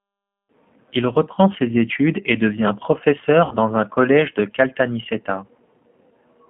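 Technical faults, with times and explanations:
Throughout, G.729 codec: the audio is confined to roughly 150 Hz to 3.4 kHz and sounds rough and synthetic, as expected from an 8 kbit/s model-based vocoder.
3.45–3.57 s, VoIP packet loss concealed by the speech codec: about 60 ms goes missing, and the decoder extends the last pitch and filter into a fading buzzy tone or coloured noise, leaving weakened audio just after, on "un collège de".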